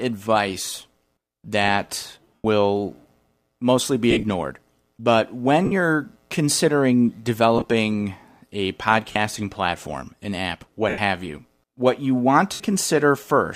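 Lost LE Audio frames hit at 0.72, 2.35–2.45, 4.11–4.24 (after "mostly be", scattered), 5.64–5.72, 7.58–7.64 (after "you're considering"), 9.12–9.16, 10.89–10.98 (between "platform an app what" and "you what you want") and 12.53–12.60 s. Each time the decoder repeats the last spectrum with scrambled phase, so the sound briefly turns into a hissy smear that fades on the longer gaps.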